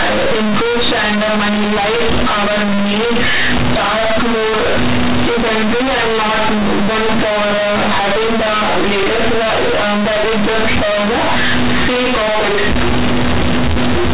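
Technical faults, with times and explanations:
Throughout: companded audio read as linear. Mu-law bytes play unexpanded as 8-bit samples, giving loud, buzzy distortion; quiet sounds come out as large as loud ones, with strong noise even in pauses.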